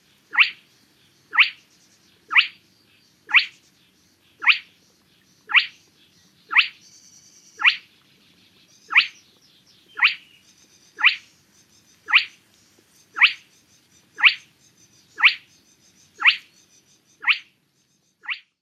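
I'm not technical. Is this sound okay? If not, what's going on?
Yes, this sound is okay, and nothing in it points to a technical problem. There are no glitches, dropouts or distortions to worry about anywhere in the clip.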